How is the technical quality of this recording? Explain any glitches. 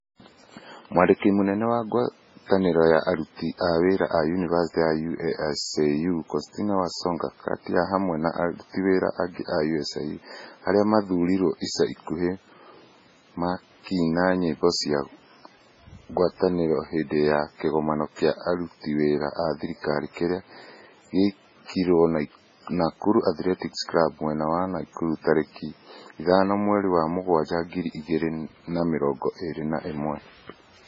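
The technical quality is poor throughout. The speech sounds watery and swirly, with metallic chirps on s sounds and nothing above 7.6 kHz, most likely from heavy MP3 compression at a starved bitrate near 16 kbps, which cuts the treble and lets weak frequency lines flicker between frames.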